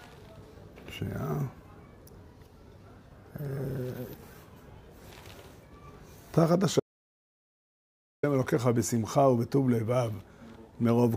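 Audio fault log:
6.80 to 8.23 s, audio dropout to silence: the input feeding the recorder was likely cut off for this stretch, through a lost connection, a failed link or an accidental mute, while writing carried on with silence. The sound stops abruptly mid-flow and resumes just as suddenly about 1.43 s later. The gap is dead silence with no background or room tone underneath, and whatever occurred during it is simply missing.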